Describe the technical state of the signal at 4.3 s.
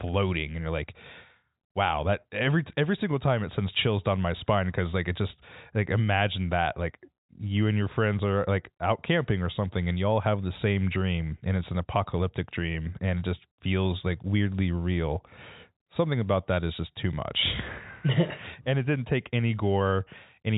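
At 4.3 s the speech is intact, carried through G.711 telephone coding that passes nothing above about 3.8 kHz, with no fault at that moment.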